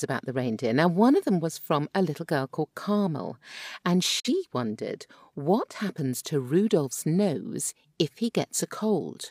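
From 4.20 to 4.30 s the speech dips to silence just before "wondered what happens to". This is a digital broadcast dropout: the receiver muted briefly, which fits one failed frame.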